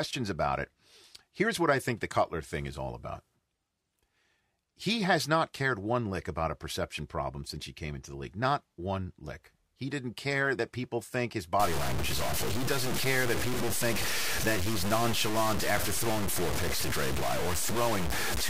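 Speech that turns harsh and grainy from 11.60 s to the end at 18.49 s, with the quietest stretches sputtering or cutting to silence. The likely cause is low bit depth without dither, consistent with 4-bit truncation, putting distortion only slightly below the voice. The waveform shows coarse staircase steps, and the spectrogram shows broadband hash that tracks the speech.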